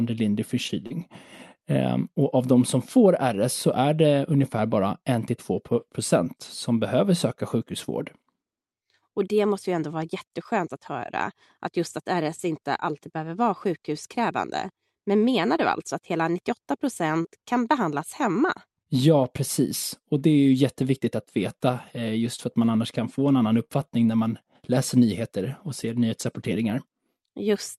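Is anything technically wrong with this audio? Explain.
Yes. The speech carries three kinds of packet-loss damage.

Lost packet rebuilt from error correction, at 0.69–0.71 s, 0.90–0.92 s and 15.58–15.60 s (each 20 ms): a lost packet was replaced by the low-bitrate backup copy carried in the following packet, so nothing drops out. Those 20 ms sound coarser and hissier. On a spectrogram the harmonics blur into a grainier, noisier smudge for one frame, with no break in the waveform.

Short concealed packet loss, at 0.87–0.92 s (35 ms filled) and at 15.56 s (19 ms), just before "alltså att hela": audio arrived too late or not at all, and the decoder extrapolated from the preceding sound before crossfading back. The result is a brief smear or wobble. Both of these stretches overlap error-correction rebuilds.

Scattered short gaps, from 17.14 to 26.45 s: roughly ten small losses, the longest around 50 ms, covering about 2% of that stretch. 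Each hole was patched by continuing the previous sound, so the speech stays clear but picks up occasional hiccups and little smears. On a spectrogram these appear as short vertical seams where the harmonic detail briefly freezes or turns noisy. The waveform shows small discontinuities at the joins. The Opus call path itself caps the content at about 12 kHz.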